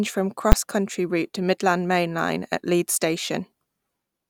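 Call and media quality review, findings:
Invalid numbers at full scale, 0.52 s: single very loud bang in speech, no gap audible. Probable component: a DSP stage whose calculation produced infinite or invalid values, clamped to maximum level. Block about 10 ms, too short for separate onset and release pops.

Suggested check: add NaN/Inf guards on filter state and gain math before the output clamp.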